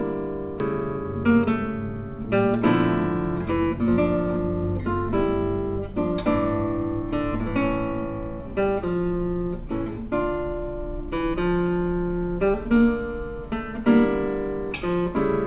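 At 0.60 to 0.62 s there's a skip ahead. Playback lurches forward with no gap and nothing filled in, so roughly 0.7 s of audio just vanishes and the material on either side gets butted together. That points to a chunk being dropped, either lost in transit or discarded when the jitter buffer overflowed while newer audio was already queued behind it. The delay falls by about the same amount in one go.

Right after that, from 0.74 to 1.64 s, you get a jitter buffer speed-up. The receiver was holding more audio than it wanted, so it trimmed out tiny slices a pitch period or so long, over and over, to bring latency back down. Altogether it shaves off something like a tenth of a second. The sound runs at about 111% speed with the pitch unchanged, which gives that brief rushed feel. All of this sits on a call path with nothing above 4 kHz, which fits G.711 A-law at 64 kbps.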